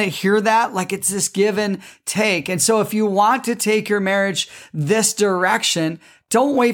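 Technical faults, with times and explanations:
No technical faults can be heard in this speech.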